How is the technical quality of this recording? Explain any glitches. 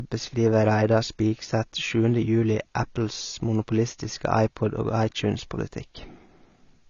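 The technical quality is poor. Across the whole recording the speech sounds dull, with nothing above 7 kHz, and sibilants and held vowels have a warbling, fizzy texture. That points to likely AAC compression at a low bitrate, around 24 kbps. The coder spends its few bits on the spectral lines a hearing model judges most audible and leaves gaps or noise in between. A plain low-pass filter would sound dull but clean, without this swirling artefact.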